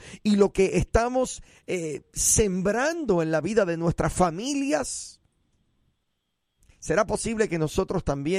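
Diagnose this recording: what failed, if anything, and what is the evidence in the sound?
Nothing in the recording points to a failure at any stage of the chain. The speech carries no audible defect to diagnose.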